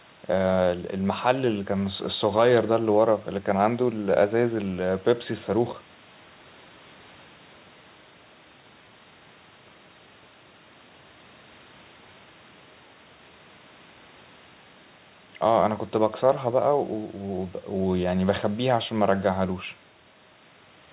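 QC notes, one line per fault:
No faults heard; call-path bandwidth ends near 4 kHz.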